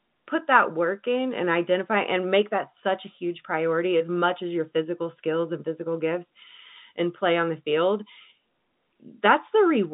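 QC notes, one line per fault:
The speech is carried as G.711 A-law telephone audio at 64 kbps, with the line band running from about 150 Hz to 3.7 kHz and nothing heard above 3.8 kHz, as expected for a fixed-line call.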